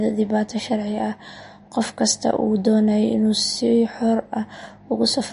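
Throughout, the speech sounds watery and swirly, with nothing above 10.6 kHz, likely MP3 compression at a low bitrate near 40 kbps that drops the treble and weak detail.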